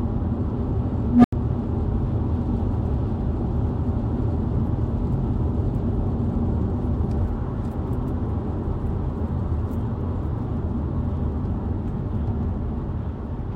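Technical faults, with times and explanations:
1.04–1.33 s, unstable filter: a low tone of roughly 200 Hz swells over about 200 ms until it clips, then the audio drops out for 84 ms. A recursive filter with bad coefficients fed back ever-growing output, overflowed, and went silent until resetting.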